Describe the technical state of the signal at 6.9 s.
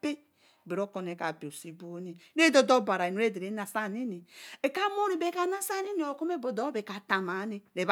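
At 6.9 s the speech signal is intact, with no audible fault at that moment.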